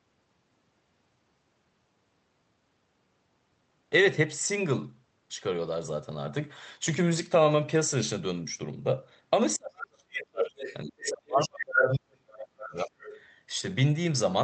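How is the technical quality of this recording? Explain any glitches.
The recording is marred by echo-canceller trouble in its second half, between 9.57 and 13.21 s.

Speech suppressed in double talk occurs from 9.57 to 10.64 s and from 10.85 to 12.93 s. The talker's level drops in patches by as much as about 40 dB, for roughly 1 s and 2 s of affected audio. This is likely the canceller mistaking simultaneous talk for echo and attenuating everything.

The other side's voice is leaking through at 10.59–10.74, 11.05–11.10, 11.41–11.49, 11.77–11.94 and 12.61–13.21 s. A second voice is heard in short fragments, mostly about 10 to 20 dB under the talker but level with them at 11.77 s. The likely cause is loudspeaker pickup that the canceller failed to subtract.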